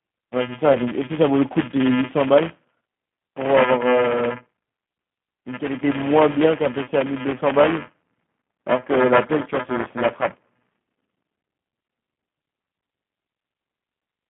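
A speech recording carries three faults. Throughout there is buffer tearing: a steady robotic buzz at 375 Hz rides on the voice and stops in the pauses. That rate fits a 128-sample buffer, where the writing and reading sides of a ring buffer have drifted into each other. In every cycle a small slice of audio roughly a buffer-lap old, around 10 ms earlier, is spliced in with hard edges. Clock-drift clicks or dropouts would be sporadic, but this buzz keeps a fixed pitch and vanishes in silence. The whole clip also carries the G.729 codec, here the G.729A variant at 8 kbit/s. The voice is confined to roughly 150 Hz to 3.5 kHz and has a plainly audible rough, synthetic texture. That comes from the codec rebuilding speech out of a filter model, a pitch predictor and a few pulses per 10 ms frame rather than sending the waveform. A plain telephone-band filter would narrow the sound but leave it smooth. 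This codec adds grain and a slightly rough, artificial edge. Between 0.73 and 0.77 s there is VoIP packet loss concealed by the speech codec. About 20 ms of signal went missing, which fits two lost 10 ms frames. Instead of a gap of silence, the decoder stretched its last pitch and filter into a brief buzzy tone or coloured noise that fades. The voice then stays weak and smeared for a moment after packets return, because each frame builds on the damaged one before it. A simple dropout would cut to silence and recover instantly.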